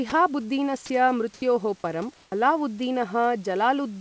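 A voice detector on the sending side of a call most likely misread part of this speech clip as background: at 0.10 to 0.12 s it stopped sending, and a 20 ms stretch of speech gives way to steady synthetic noise before the signal resumes. During two pauses the sender likely fell silent and the receiver filled them with generated comfort noise, replacing the real room background, which sits about 34 dB below the speech. From 1.34 to 1.42 s a smooth, featureless hiss about 4 dB louder stands in for it for 80 ms. From 2.14 to 2.32 s the fill drops about 19 dB below the real background, leaving 180 ms of near silence. Overlapping the end of that pause, the detector was likely slow to register that speech had restarted, so the onset was clipped. The first 50 ms, from 2.27 to 2.32 s, were never sent, and the next sound begins abruptly without its soft attack. Throughout, nothing reaches above 8 kHz, consistent with a G.722 wideband call codec.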